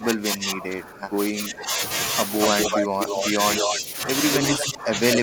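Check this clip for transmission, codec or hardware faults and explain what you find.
Two faults recur throughout the speech: speech suppressed in double talk and echo leak.

Speech suppressed in double talk runs from 0.0 to 1.78 s, 2.54 to 4.09 s and 4.41 s to the end. The speech dips by around 15 dB, most likely because an echo canceller mistook it for echo. The waveform envelope sags, and the spectrogram shows dimmed energy.

Echo leak appears at 2.41 to 3.8 s, 4.34 to 4.72 s and 5.13 to 5.19 s. A copy of the speech trails by 241 ms, roughly as loud as the original in the first and last stretches and about 5 dB below it in the middle one. Its likely cause is loudspeaker pickup left uncancelled. The spectrogram shows duplicated patterns offset in time.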